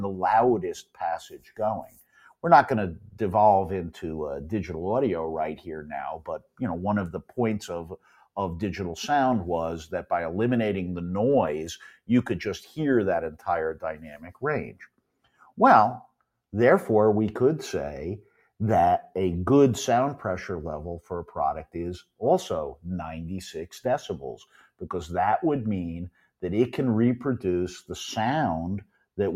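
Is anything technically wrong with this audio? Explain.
Yes. A noise suppressor built for speech is running on this material throughout. It treats steady tones, ambience and decay as noise and pulls them down. The level swings by around 5 dB, so the sound pumps and thins while attacks pass through.

The same noise suppressor cuts the sound harder at 0.83 to 3.2 s, 5.56 to 8.37 s, 11.97 to 16.22 s, 21.01 to 22.85 s, 24.39 to 24.83 s, 26.1 to 26.41 s and 28.84 to 29.18 s. Drops reach about 15 to 18 dB. Sustained parts sink and tails are cut short.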